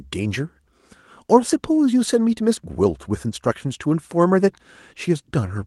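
At 3.31 to 3.33 s, the speech briefly turns rougher and noisier for about 20 ms without any gap or dropout. This is a lost packet rebuilt from error correction: one stretch of audio, which points to a single lost packet, never arrived. The following packet carried a low-bitrate copy of it, Opus in-band forward error correction, and the decoder played that coarser copy. The call path's Opus coding limits the audio to about 12 kHz throughout.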